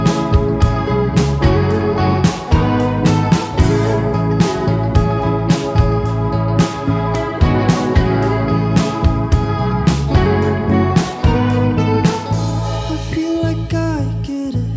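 No technical faults are audible anywhere in this audio.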